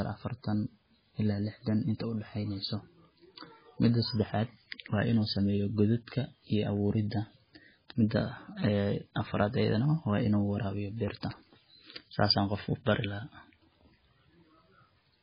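Heavy MP3 compression affects the speech for its whole length, likely from encoding at a very low bitrate, the damage fitting something around 16 kbps. Nothing survives above 5 kHz, so the audio sounds dull and muffled, with a watery, swirling texture and smeared consonant onsets. On a spectrogram the energy stops at a hard horizontal ceiling near 5 kHz, and below it weak components flicker on and off as isolated blocks from frame to frame.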